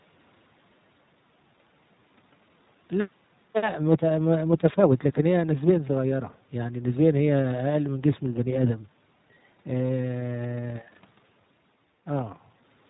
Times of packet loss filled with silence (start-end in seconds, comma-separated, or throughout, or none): none